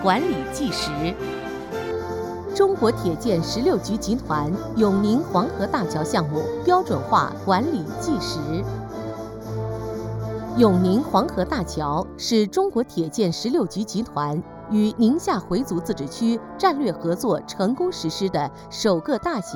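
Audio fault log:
1.91–19.56 s, channel delay (comb filtering): one channel lags by roughly 0.2 ms, so mono summing carves evenly spaced notches from about 3 kHz up. The hollowness stays fixed rather than sweeping like a phaser.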